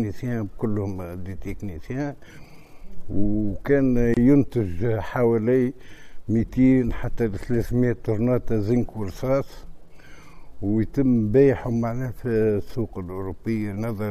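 At 4.14 s there's a gap at a join of encoded pieces: a roughly 27 ms dropout where separately encoded 10-second chunks meet, with the start delay and end padding left in, so the sound briefly drops out, then resumes where it left off.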